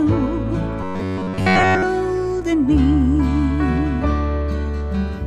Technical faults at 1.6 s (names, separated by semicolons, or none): robotic sound from repeated short buffers